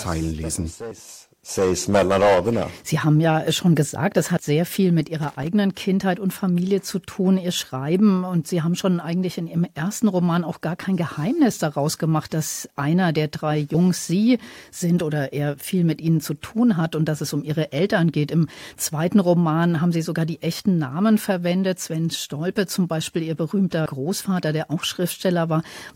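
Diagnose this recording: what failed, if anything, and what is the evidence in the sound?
A loose connector in the analogue wiring made and broke contact, producing irregular crackle from 5.23 to 5.47 s, just after "sehr viel mit".

Compressed frames were skipped at the codec: at 23.86 s the speech jumps roughly a tenth of a second ahead.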